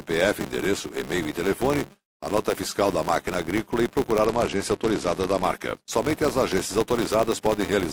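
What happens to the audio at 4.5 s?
At 4.5 s the speech sits inside a Bluetooth SBC bit pool drop running from 4.25 to 5.43 s, starting just after "máquina agrícola e procurar". A congested wireless link forced the encoder to cut its bit allocation, which points to a bit pool falling from 28 to 12, around 96 kbps. The highest sub-bands are left nearly empty and the rest are quantised coarsely, so the treble turns dull and a gritty noise rides on the speech until the rate recovers.

Underneath that, and present for the whole clip, is a filter restarted on every block. The filter discards its internal state at each block boundary and starts again from silence, so every block opens with a small transient. Those transients repeat at 200 Hz, which fits a block every 5 ms, and form a buzz whose strength rises and falls with the level of the speech.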